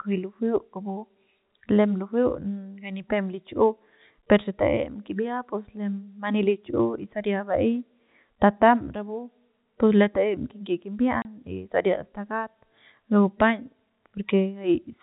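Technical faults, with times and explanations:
11.22 to 11.25 s, packet loss filled with silence: the speech drops out abruptly for 30 ms, leaving a short hole of dead air. A stretch of audio never reached the receiver, so nothing was played in its place. The gap's length points to a single lost packet. The surrounding telephone-band G.711 sound, limited to 4 kHz, carries on either side.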